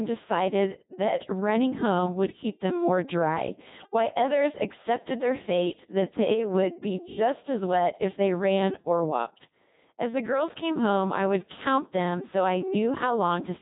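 From the start, the speech carries the sound of the Codec 2 vocoder. The decoder rebuilds the voice from sine waves, using only pitch, voicing, level and spectral shape. The result is heavily robotic and buzzy, which fits a 2.4 kbit/s mode.

Between 3.80 and 3.94 s, after "keep them more dry" and before "others accepted their fate", bit errors on digital voice radio strike. Roughly 7 percent of bits flip, corrupting the frame parameters. Pitch, level and tone colour jump wildly. The result is a short warbling bleep that points to about four damaged frames.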